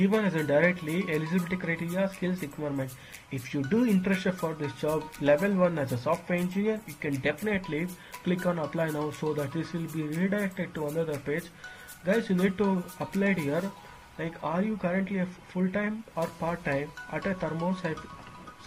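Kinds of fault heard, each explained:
No technical faults can be heard anywhere in the signal.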